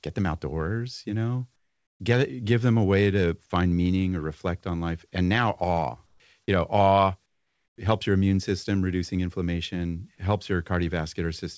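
Comfort noise in place of the background appears three times in the pauses: 1.56 to 2.00 s, after "them outdoors you know"; 6.06 to 6.20 s, after "now awe"; and 7.26 to 7.78 s, before "helps your immune system". Each time the real room tone gives way to smoother synthetic noise, about 13, 5 and 11 dB quieter respectively, likely from discontinuous transmission on the call path, whose band stops at 8 kHz. Unlike a gate or dropout, the pause is filled with noise rather than silence.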